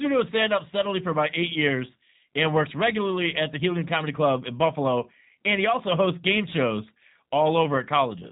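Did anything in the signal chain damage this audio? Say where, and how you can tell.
Yes. The damage is at the codec stage and runs through the whole clip: the speech has the slightly rough, synthetic texture of G.729, and nothing above 3.8 kHz passes. Each 10 ms frame is rebuilt from a vocal tract filter, a pitch predictor and a few pulses instead of the real waveform, and the result fits an 8 kbit/s G.729A stream. A simple analogue or telephone band-limit would cut the top but leave the remaining speech smooth; this speech is plainly rebuilt.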